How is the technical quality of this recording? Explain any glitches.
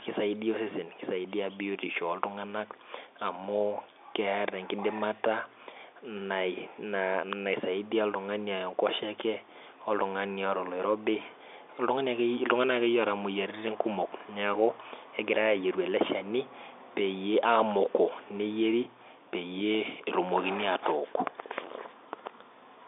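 No glitches can be heard anywhere in the recording. The speech comes over a G.711 mu-law telephone line, so it is confined to roughly 300 Hz to 3.6 kHz, with at most a faint trace of that coding's quantisation noise riding under the voice.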